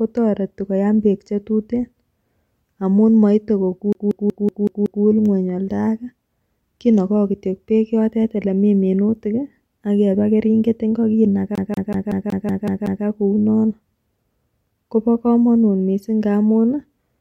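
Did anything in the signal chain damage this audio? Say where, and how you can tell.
Yes, at the playback stage: the disc is stuck on one turn, a CD skip where a scratch keeps knocking the laser back a track. Right after "amun moite", from 3.93 to 5.05 s, the same 187 ms slice of speech repeats six times. After "keringet ingo kinaga", from 11.55 to 13.05 s, it repeats eight times. Each jump leaves a brief mute, giving a fast, evenly spaced stutter.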